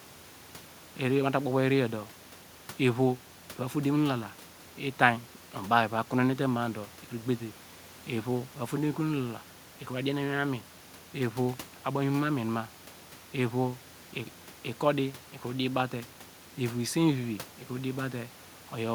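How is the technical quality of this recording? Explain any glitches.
No glitches or faults are audible.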